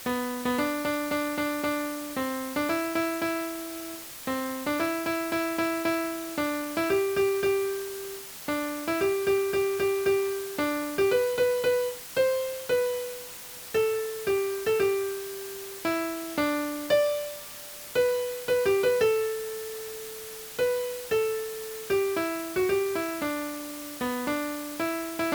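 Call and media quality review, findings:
Constant even hiss across the whole clip, no distortion. Low bit depth with dither: 5 bits with dither, so the rounding error becomes white noise sitting only about 15 dB under the signal.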